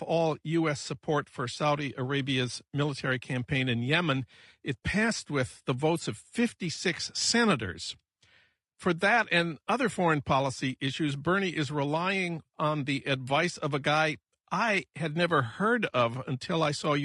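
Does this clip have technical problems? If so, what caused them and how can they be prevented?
Yes. The speech was most likely squeezed through low-delay AAC compression, the AAC-ELD type used for video calls, at a rate the damage suggests is near 32 kbps. Its short frames of roughly 10 ms cannot separate pitch harmonics finely, and the small bit budget spreads noise between them. Throughout the clip the voice sounds rough and grainy, with noise filling in around the harmonics and a dulled, synthetic-sounding top band. Prevent it by sending at a higher bitrate or using a longer-frame codec.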